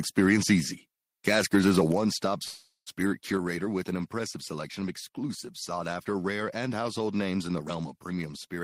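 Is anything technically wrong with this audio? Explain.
Yes, there are three faults.

From 1.27 to 1.81 s there is microphone overload. The loudest peaks of the speech carry a harsh, crackling edge. The likely cause is input gain set so high that peaks ran about 3 dB past the converter's ceiling, flattening around one percent of samples.

At 1.92 s the microphone volume steps down. Voice and background fall together by about 5 dB in a single abrupt step, just after the distorted stretch. This is likely the call software reacting to the clipping by cutting the device's input gain at once.

From 2.43 to 2.89 s there is a call audio freeze. The last sound is stretched into a fading buzz for about 430 ms, including roughly 70 ms of silence. Then speech resumes where it stopped, with nothing lost but arriving 430 ms later. The likely cause is delayed packets draining the jitter buffer.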